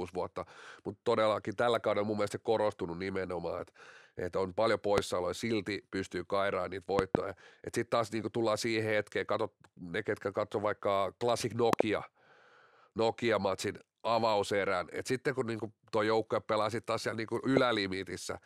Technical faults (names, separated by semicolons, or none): loud pop